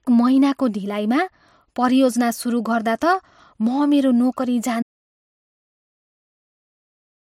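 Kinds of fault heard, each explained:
Audio dropout to silence: speech stops abruptly at 4.83 s and never returns, leaving silence, not a fade or room tone, likely a lost input.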